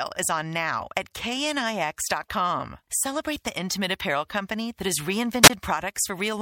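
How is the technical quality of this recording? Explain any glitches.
The recording has one glitch near the end. From 5.42 to 5.50 s there is a wireless microphone squelch dropout. The radio link from the microphone faded. When the received signal got too weak, the receiver's squelch cut the output to protect against noise. You hear a short burst of hiss, then a gap of near silence lasting about 22 ms. Then the speech comes back.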